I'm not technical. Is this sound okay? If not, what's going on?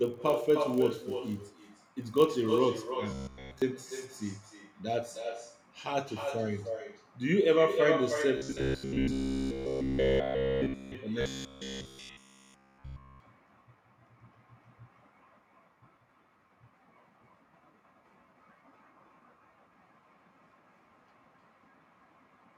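No, it isn't. Three separate problems can be heard.

Echo with no canceller: through the whole clip, everything said comes back about a third of a second later as a quieter, thinner copy. The other end is playing the call on a loudspeaker and its microphone sends it back. Unlike ordinary room reverberation, the copy is a distinct delayed repeat, not a smooth tail.

Filter restarted on every block: from the start to 2.60 s, a steady 50 Hz buzz rides along with the speech, rising and falling with its loudness. A processing stage is resetting itself many times a second, and each reset leaves a tiny tick. The ticks blur into that hum.

Robotic sound from repeated short buffers: at 3.11 to 3.62 s, 8.37 to 10.95 s and 11.21 to 13.20 s, the speech turns into a rigid, metallic buzz at about 67 Hz. The likely cause is audio arriving too late, so the software loops the last sliver of sound, about 15 ms, while real speech is skipped. 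This is fully in place for the two later stretches and partly for the first. The buzz from the filter fault sits under speech that is still intact, but here the speech itself is replaced.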